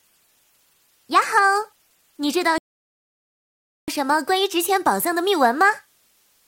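From the start, a constant, even hiss sits under the audio: low bit depth with dither. The signal is carried at a resolution that fits about 10 bits, and dither noise was added before each sample was rounded to that coarse grid. The rounding error therefore becomes steady white noise rather than distortion. It sits roughly 40 dB below the signal, and it neither pumps nor changes character with level.

At 2.58 s the audio drops to silence, and at 3.88 s it picks up at exactly the point where it stopped. This is a rebuffering stall: the player used up its downloaded audio and paused until more data arrived. No material is skipped or repeated. The gap adds about 1.3 s to the playback time.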